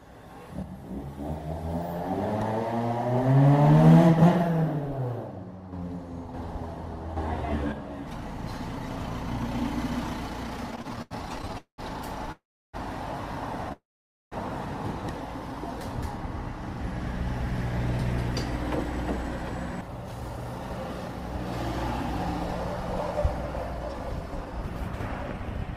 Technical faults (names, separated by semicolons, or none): repeated stalls (stutter); call audio freeze; jitter buffer speed-up